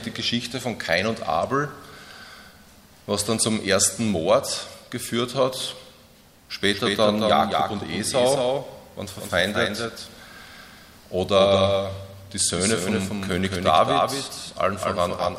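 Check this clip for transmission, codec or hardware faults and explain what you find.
There is one fault, a doubled audio track. It starts abruptly at 6.73 s and runs to the end. A second, full-band copy trails the original by about a fifth of a second, a few dB quieter, with no decay or room colour. Likely cause: a slower second capture path or misaligned edit.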